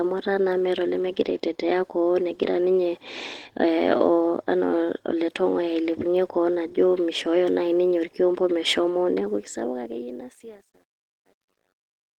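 Throughout the speech, Opus voice compression leaves a hoarse, faintly robotic texture. The top band stays present, which fits a hybrid mode at around 16 kbps with coarse SILK coding below 8 kHz. That full band, rather than a dull cutoff, sets it apart from simple low-pass filtering.

From 9.27 s, after "nai ninye orkiompo meshomo", the fade-out that runs to 12.2 s shows truncation distortion on a fade. The volume stage keeps too few bits, which fits roughly 10 bits, and adds no dither. From 10.1 s to 12.19 s the tail turns gritty instead of thinning out into a steady hiss.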